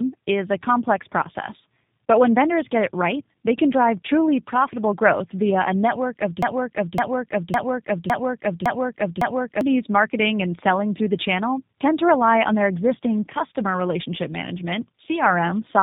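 This speech recording shows tandem speech coding throughout: it sounds rough, muffled and warbly, as though it passed through two low-bitrate speech coders in a row. The character points to something like AMR-NB followed by G.729A, with each coder re-encoding the previous one's degraded output. On a spectrogram, nothing appears above about 3.8 kHz, and the harmonics look smeared and blotchy instead of forming clean striations. From 6.43 to 9.61 s a broken-record loop takes over. A 0.56 s fragment repeats exactly six times back to back, and whatever should have played then is lost. The likely cause is a stalled player or stream that kept resending its last buffered piece. The waveform shows an identical block repeating at regular 0.56 s intervals, and the spectrogram shows the same pattern copied side by side.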